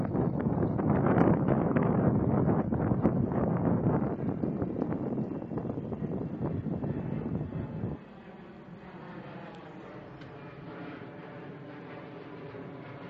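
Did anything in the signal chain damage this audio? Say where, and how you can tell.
Yes, it's the adaptive stream starting at a low bitrate, so this is the network and playback stage. From 0.0 to 4.0 s the treble is missing or synthetic and the codec artefacts are stronger. Then the quality jumps up suddenly with no gap. The low start points to something like HE-AAC at 16 kbit/s, and the step up fits AAC-LC at 96 kbit/s. The player opened on a cheap rendition to start quickly, then switched once it had measured the connection.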